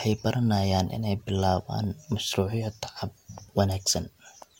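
At 3.86 s the speech jumps forward, and roughly 20 ms of sound is lost. These are compressed frames skipped: about one frame, 23.2 ms long, never reached playback because it was missing or the decoder rejected it as damaged.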